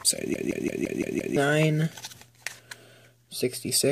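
From 0.34 s to 1.37 s a system hang loop takes over. The playback side stalled while the audio hardware kept reading the same ring buffer, so one 171 ms slice of sound repeats exactly six times at about 5.9 Hz, a length which fits an 8192-sample buffer. With a buffer this long the result is a hard, machine-gun stutter rather than a buzz, and about a second of the real audio is lost in its place.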